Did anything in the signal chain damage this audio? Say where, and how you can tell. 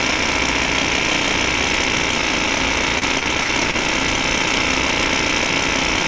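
Yes. From 2.99 to 3.75 s the sound turns choppy and robotic: repeated packet loss in the network, each gap (up to 44 ms) patched with repeated audio.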